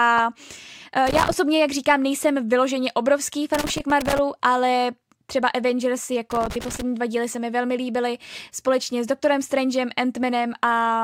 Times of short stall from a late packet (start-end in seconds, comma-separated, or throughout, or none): none